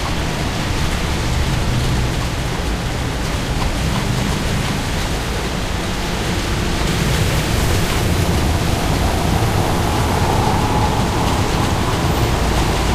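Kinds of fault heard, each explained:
Doubled audio track: likely a slower second capture path adds a dry copy, about 10 dB down and roughly 400 ms late, cutting off abruptly at 2.1 s.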